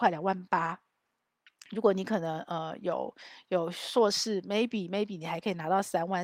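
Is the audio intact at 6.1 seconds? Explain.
No. At 6.1 s the audio falls inside a run of repeated timing corrections that spans 0.03 s to 6.20 s. The receiver keeps repeating short slices of sound to stay in step with a sender that delivers audio slightly too slowly. The edits all lengthen the signal, so the passage plays at about 97% of its proper pace and gains roughly 150 ms overall. Around 6.1 s this is heard, if at all, as slight hiccups or an unsteady tempo.

The cause is clock drift between sender and receiver. The sender's audio clock runs about 3% slower than the receiver's for the whole clip. Because fewer samples arrive than the receiver plays out, its jitter buffer keeps draining. The receiver then has to pad the stream by duplicating fragments at uneven intervals. Those patches are the small edits at 6.1 s and throughout the rest of the clip.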